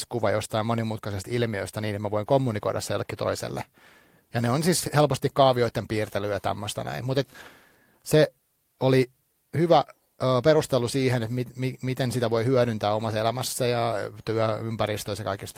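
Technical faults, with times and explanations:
No technical faults are audible.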